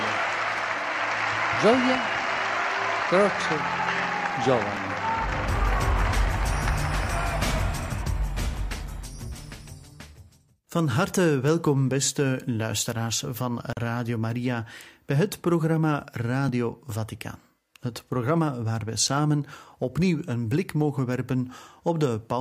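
At 0.58 s and again at 4.77 s there is a small jump forward in the sound. No silence comes between the two sides. This is a dropped buffer (overrun), likely from samples being overwritten before they were read, each losing only a few milliseconds.

From 13.73 s to 13.77 s a gap at a join of encoded pieces opens. For about 39 ms the sound stops, with smeared edges. Encoder delay and end padding were left in where separately encoded pieces meet. The sound then resumes where it stopped.

At 16.49 s the same short skip returns.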